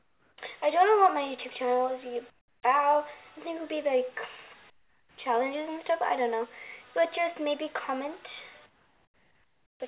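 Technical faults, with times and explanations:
0.0–0.38 s, 2.3–2.63 s, 4.7–5.18 s and 8.66–9.8 s: comfort noise in place of the background. In each gap the real background, about 32 dB below the loudest passages, gives way to a flat, featureless hiss about 13 to 18 dB quieter, likely because the sender halted transmission and the receiver synthesised filler noise.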